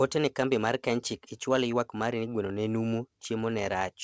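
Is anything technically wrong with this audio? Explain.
Yes. There are two related timing faults.

Clock drift between sender and receiver runs through the whole clip. The sender's clock runs faster than the receiver's, by roughly 4 percent. More audio arrives than the receiver plays out in the same time. The jitter buffer keeps filling up. The receiver has to discard material to avoid falling further behind. The result is a faint, recurring unsteadiness rather than a single obvious glitch.

Repeated timing corrections occur from 0.16 s to 3.76 s. Playback runs at about 104 percent of normal speed there. The receiver keeps cutting short pieces out of the speech to stay in step with the fast sender. All the cuts go the same way, but they are unevenly spaced. Each one is small. The call codec's band limit, with nothing above 8 kHz, is also present.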